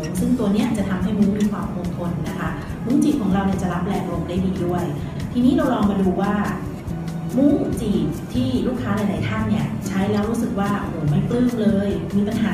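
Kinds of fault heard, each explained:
No faults can be heard anywhere in the signal: there are no dropouts, gaps, level jumps or added noise.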